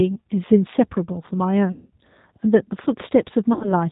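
Throughout, the speech carries plainly audible G.729 codec damage, which fits G.729A at 8 kbit/s. Each 10 ms frame is rebuilt from a vocal tract filter, a pitch predictor and a few pulses, and nothing above 4 kHz passes, so the voice sounds rough, slightly synthetic and band-limited.

From 1.72 to 1.90 s, VoIP packet loss concealed by the speech codec stretches the last pitch and filter into a buzzy tone or coloured noise that fades, across a gap that fits about 180 ms of lost frames. From 3.53 to 3.74 s, a shorter loss of around 70 ms does the same, and the rebuilt speech stays weak and distorted briefly after packets return.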